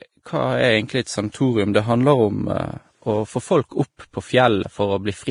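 Transcoding between lossy codecs runs through the whole speech clip. Nothing survives above about 10.6 kHz, and two different kinds of coding damage sit on top of each other and are heard together: the artefacts of a 31 kbit/s Vorbis encode and those of a 64 kbit/s AAC-LC pass. The likely cause is that a file already squeezed at a low bitrate was re-encoded. The later codec spent its bits preserving the earlier damage and added its own, while the lowest cut-off in the chain stayed in place.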